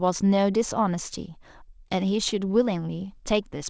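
Speech, passed through a call path whose content stops at 8 kHz (consistent with a wideband codec such as G.722), has a short stall from a late packet at 1.88 to 1.92 s. The jitter buffer ran dry, so the receiver stretched the previous sound by about 20 ms and then resumed exactly where it left off. That is what distinguishes it from a lost packet: nothing is skipped, only held slightly too long, and everything afterwards arrives 20 ms later.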